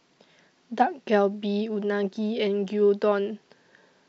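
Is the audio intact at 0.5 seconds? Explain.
Yes, the audio is intact at 0.5 seconds, with no fault audible at that moment.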